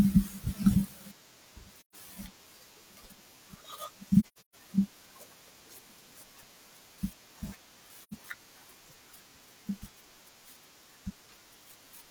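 Speech, marred by AAC frame loss with muting: whole frames of compressed audio never reached the decoder, which replaced them with silence. The gaps fall at 1.80–1.95 s, 8.03–8.13 s, and across 4.19–4.55 s, where several holes are scattered, the longest around 150 ms. The durations fit runs of frames about 43 ms long. Overlapping windows fade the sound out and back in, so each dropout is a soft-edged hole.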